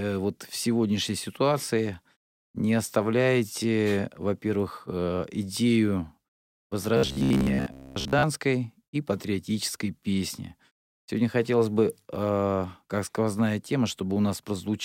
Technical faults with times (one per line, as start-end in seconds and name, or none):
6.97-8.23 robotic sound from repeated short buffers